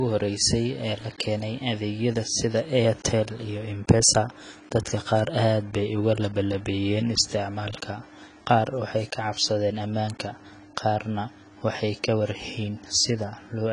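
From start to finish the speech is dull and band-limited, with nothing above 10.5 kHz, and sibilants and sustained vowels carry a smeared, warbling, fizzy texture. The damage is plainly audible and is likely AAC compression, specifically AAC-LC. At a low rate, which fits roughly 24 kbps, the encoder lowers its cut-off and quantises the upper bands coarsely or fills them with substitute noise.

At 5.19 s there is a single bit error spike, heard as one sharp, broadband tick that has no relation to the surrounding speech. A flipped bit in memory or on a digital link makes a sample jump by a power of two and then return. The tick's brevity points to one corrupted sample rather than a short run.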